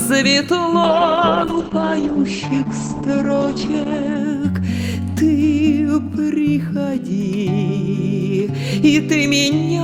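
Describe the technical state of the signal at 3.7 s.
A call bitrate drop runs from 0.84 to 4.25 s: the encoder falls from 64 to 10 kbps and narrows bandwidth from 20 to 8 kHz, leaving coarse, muffled sound.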